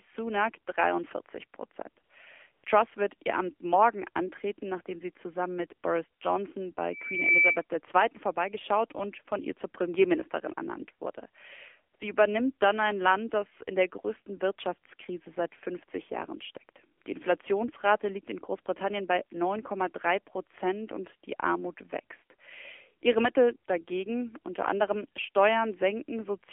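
The whole clip goes through the AMR narrowband mobile codec. Everything sits between about 300 Hz and 3.4 kHz, so the top end is gone, and the speech has that buzzy, synthetic edge you get when the vocal-tract model is fed very few bits. That fits a low AMR-NB rate around 7.4 kbps. The voice sounds thin and processed the entire way through.

The first dropouts come at 2.04–2.10 s and 2.52–2.64 s. These are AMR comfort noise: the phone decided nobody was talking and stopped sending speech frames, and the far end filled the gap with smooth synthetic hiss built from a rough level-and-spectrum sketch. You hear the real background swap out for a flat, even noise for 60 ms and then 120 ms.

At 6.91–7.64 s there's a loudspeaker feedback squeal. The mic is hearing the speaker it drives, and at 2.3 kHz the loop gain tips over one. That tone swells by itself over a bit under half a second into a piercing whistle that ends up about 5 dB above the speech.

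The comfort-noise swaps come back at 11.96–12.00 s, 16.98–17.02 s and 17.04–17.06 s. These are short 20–40 ms patches, the last two almost back to back, so the background briefly flattens into that same steady synthetic hiss and then snaps back.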